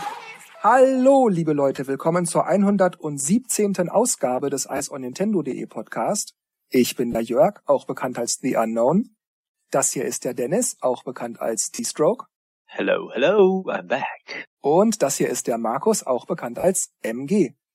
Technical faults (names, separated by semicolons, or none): lost LE Audio frames